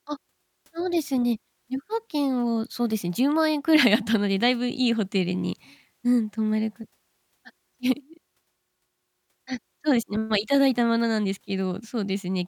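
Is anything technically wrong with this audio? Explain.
No technical faults are audible.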